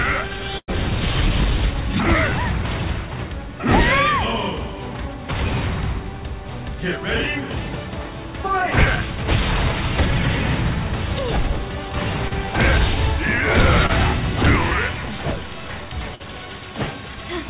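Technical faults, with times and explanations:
0.58–0.70 s and 16.15–16.22 s, burst of packet loss: a run of packets went missing here. The first gap loses about 100 ms and the second about 40 ms. The receiver patched each one by carrying on the last bit of sound and fading it down, so you hear a held buzz or a dying hiss before the audio picks up again further along. The stretch in between is gone. The band above 4 kHz is already empty, which fits a narrowband G.711-style call codec.
12.28–12.47 s and 13.86–13.91 s, short concealed packet loss: two small dropouts, about 40 ms at 12.28 s and 20 ms at 13.86 s. Each hole got filled with a short extrapolation of the preceding sound, pitched if it was voiced and noise-shaped if not, then crossfaded back into the real signal. The result is a brief smear or wobble rather than a clean gap. The first one also stretches timing by a hair, a sign the jitter buffer was adjusting.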